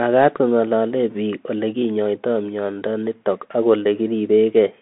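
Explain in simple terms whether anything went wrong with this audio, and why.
Bluetooth CVSD headset codec damage runs through the whole clip. This headset codec sends speech one bit at a time, nudging the level up or down, and passes roughly 200 Hz to 3.5 kHz. Everything sounds thin and muffled, s sounds turn scratchy, and a grainy hiss sits underneath.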